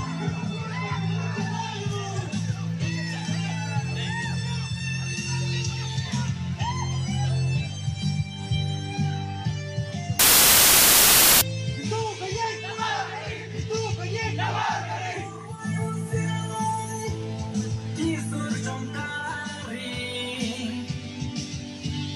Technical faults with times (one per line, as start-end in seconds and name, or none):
10.19-11.41 samples built from the wrong bytes